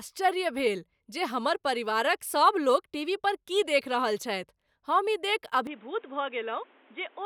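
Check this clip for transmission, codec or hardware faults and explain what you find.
Input switched to a poorer device, from 5.67 s to the end of the speech clip. The capture path likely changed mid-recording to a lower-grade microphone or a headset's call profile. Nothing comes through above 3.8 kHz, so the voice suddenly turns dull and boxy with no gap at the switch. The level drops by about 5 dB, and a new background noise sits roughly 30 dB below the speech.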